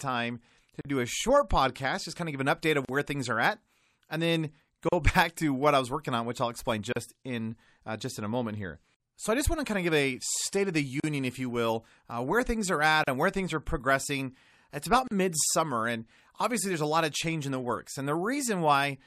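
The speech was likely compressed as MP3, at a bitrate that sounds like about 64 kbps. That leaves the encoder too few bits. It cuts the treble at a fixed point and drops weaker frequency lines, which flicker on and off between frames. The result is plainly audible throughout: a watery, swirling texture, metallic chirps on s sounds, and softened, smeared consonant attacks.

A gap at a join of encoded pieces appears at 0.81, 2.85, 4.89, 6.93, 11.0, 13.04 and 15.08 s. The audio was encoded in separate pieces, roughly two seconds apart, and joined without trimming, so each encoder's start-up delay and end padding stayed in as silence. Each join opens a hole of about 38 to 39 ms with smeared edges, and then the speech resumes exactly where it broke off.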